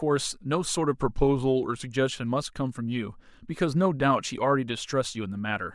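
From 1.00 s to 1.85 s the speech drops in pitch by about a semitone, 103 cents, and runs 5.8% slow, then snaps back to normal speed. This is a drift correction step, likely clock-matching software resampling in one jump to rebalance its buffer. On a spectrogram the harmonics step down as a group and step back up at 1.85 s. The waveform over that stretch looks slightly stretched in time.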